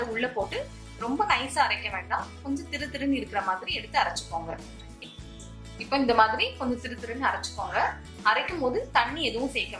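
The signal holds steady throughout, with no audible dropouts, distortion, noise bursts or timing disturbances at any point.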